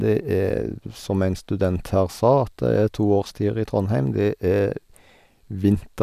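Speech, with no audible faults.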